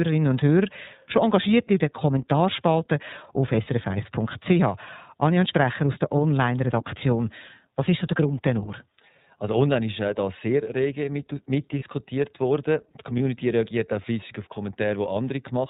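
From start to finish the speech carries plainly audible iLBC codec damage. Everything above 4 kHz is gone, giving a narrowband telephone quality, and the voice has a slightly rough, synthetic texture because each frame's excitation is coded on its own with no help from the frame before. The character fits iLBC's 30 ms frame mode at 13.33 kbps.

From 11.79 to 11.83 s there are lost iLBC frames. The gap is consistent with a single dropped 30 ms frame. The decoder covers it by repeating the last pitch cycle blended with noise, so instead of silence a short held, faintly buzzy vowel-like sound appears. Because iLBC frames decode independently, the voice returns to normal almost immediately after the gap.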